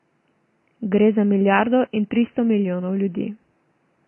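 Throughout the speech, the sound is dull and smeared, with a fizzy warble on sibilants. This is likely AAC compression at a low bitrate, around 24 kbps.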